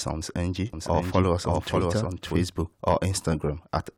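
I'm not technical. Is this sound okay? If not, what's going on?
No. From 0.73 to 2.45 s you hear an echo of the speech about half a second behind, a bit quieter. This doubled audio track likely comes from the sound being recorded twice. At 1.80 s there is a brief chirp or blip, caused by damaged data in a compressed stream that the player momentarily couldn't read.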